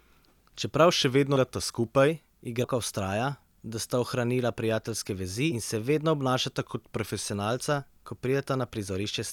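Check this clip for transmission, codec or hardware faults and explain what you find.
Two kinds of fault turn up: a playback-rate step that detunes the sound twice, and three places where compressed frames were skipped.

Drift correction step, 0.92 to 2.08 s and 6.60 to 7.23 s: the playback rate drops by 6.2 percent and the pitch falls by about 111 cents, a little more than a semitone. The cause is likely clock-matching software slowing playback in one step to refill its buffer. Everything sounds slower and flatter for those stretches.

Compressed frames skipped, at 1.36 s, 2.64 s and 5.52 s: whole blocks of encoded audio were never played, either because they were missing from the stream or because the decoder rejected them as damaged. The sound leaps forward by roughly 200 ms, 150 ms and 400 ms, amounts that fit multiples of a 32 ms frame. The first skip falls inside the first slowed stretch.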